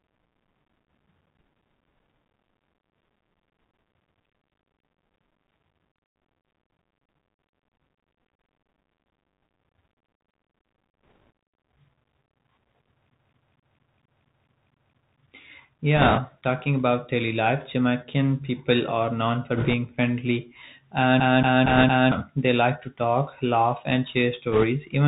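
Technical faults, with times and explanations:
Throughout: Bluetooth CVSD headset codec. The speech travels as a single up-or-down bit per sample at 64 kHz, with a step size that adapts to the signal. As a narrowband codec, its band stops near 4 kHz and the sound turns muffled and narrow. Loud, bright moments outrun the step and distort, s sounds come out scratchy, and a granular hiss sits under the speech for the whole clip. The damage is plainly audible.
11.08–11.16 s, 15.97–16.20 s, 19.57–19.74 s, 21.66–21.84 s, 24.52–24.65 s: bit errors on a Bluetooth voice link. On that headset link, flipped bits put a rushing, crackly noise over the speech. There are no sharp clicks, since each bit carries only a small step and every error fades out. The worst burst comes just before "talking about daily life", at around 5 percent. Others follow "people are known for" and fall between "talk laugh and share" and "even when life is".
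13.14–15.20 s and 21.20–22.12 s: CD stuck on one turn. A scratch keeps throwing the laser back one track, so a 229 ms slice of audio repeats, with a brief mute at each jump. The first stretch loops nine times and the second loops four times. The result is the fast, even stutter of a skipping disc. The second loop overlaps the crackle at 21.66 s.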